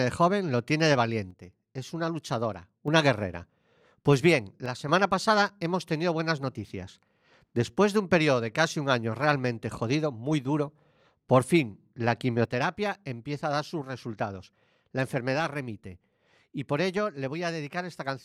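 At 1.31 to 2.88 s, 4.66 to 4.89 s, and from 12.45 s to the end, the speech drops abruptly by about 6 dB, likely one channel dropping out before the mono sum. Unlike a fade or gain ride, the step is instant and exact, with no change in tone.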